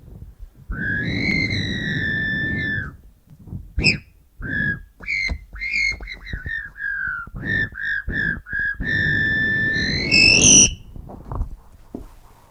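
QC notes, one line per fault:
1.31, 3.30, 5.28, 7.27, 9.26 and 11.25 s, overlap between stream segments. The sound skips briefly at each point, about every 2 s, which fits 2-second segments. Overlapping time stamps make the player discard 4 to 12 ms of real audio, so the waveform jumps.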